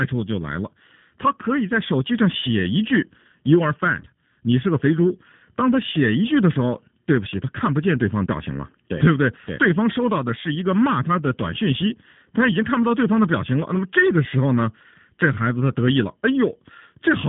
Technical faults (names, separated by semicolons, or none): channel delay (comb filtering); G.729 codec